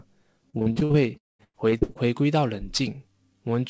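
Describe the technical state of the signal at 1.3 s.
At 1.3 s the sound falls into near-silence from 1.17 to 1.41 s, after a brief fading buzz, which is likely a long network dropout: a sustained gap rather than short holes. This sits inside a stretch of repeated packet loss (robotic sound) from 0.50 to 1.97 s, where about fourteen short gaps, the longest about 0.1 s, are patched by repeating sound, giving choppy sound with pieces missing.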